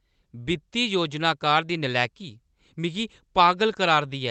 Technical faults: none

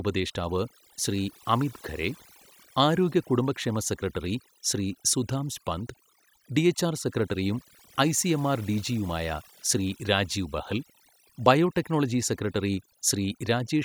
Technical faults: overdone noise removal

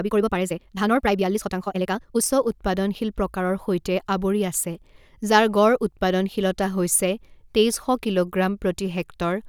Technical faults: time-stretched section

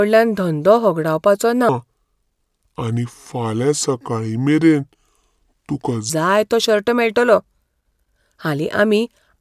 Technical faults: wrong sample rate

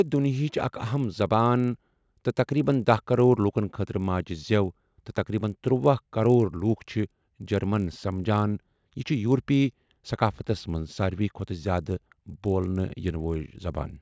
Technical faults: resampler restarted on every block

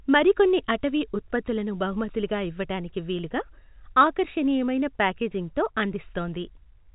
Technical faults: none

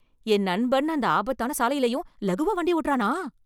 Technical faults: time-stretched section

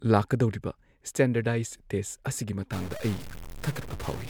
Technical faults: generation loss; stuck bit

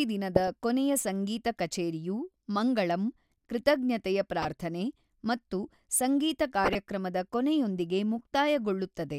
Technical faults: DAB burbling

